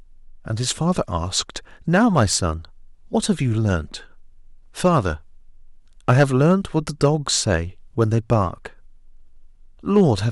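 Hard clipping hits the speech six times: 1.95–2.33, 4.85–4.98, 6.09–6.53, 7.04–7.07, 8.01–8.33 and 9.96–10.01 s. Peaks exceed what the stage can pass, by about 2 to 4 dB, and about 7 dB at 6.09 s. Their tops are cut flat. Each burst crackles, harshest at 6.09 s.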